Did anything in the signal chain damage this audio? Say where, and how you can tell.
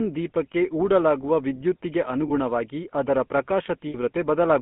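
Yes. At the codec stage, the whole clip has the buzzy, gravelly roughness of the GSM full-rate codec, and it is plainly audible. The band runs only from 150 Hz to 3.4 kHz. The codec rebuilds speech from a vocal-tract model driven by sparse regular pulses, which fits the 13 kbps full-rate mode.

At the network stage, there are lost GSM frames at 0.52 to 0.55 s and 2.28 to 2.31 s, each a short metallic ring. A longer one at 3.88 to 3.96 s fits about three 20 ms frames. Each gap is bridged by repeating the last good frame's settings.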